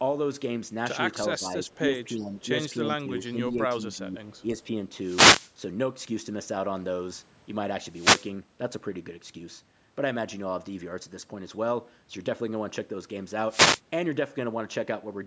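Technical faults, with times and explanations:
1.38–1.69 s, 2.14–2.35 s and 2.87–4.48 s, speech suppressed in double talk: the speech dips by up to about 10 dB in brief pieces, likely an echo canceller turning down its talker while both sides spoke.
1.74–1.78 s, 2.39–2.45 s, 3.20–3.31 s and 4.32–4.63 s, echo leak: a faint scrap of the voice, roughly 25 to 35 dB down, returns 338 ms late, likely where cancellation fell short.
4.99–5.55 s, 7.88–8.34 s and 13.48–13.81 s, wireless microphone noise hit: a swish of static as the FM radio signal fades through cancelling reflections and receiver noise rises over the voice.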